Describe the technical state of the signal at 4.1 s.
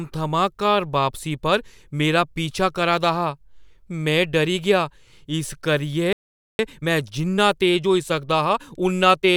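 At 4.1 s the speech signal is intact, with no audible technical fault.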